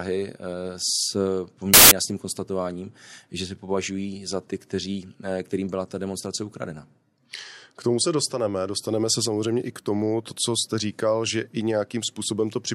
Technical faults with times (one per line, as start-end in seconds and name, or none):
1.74-1.91 samples built from the wrong bytes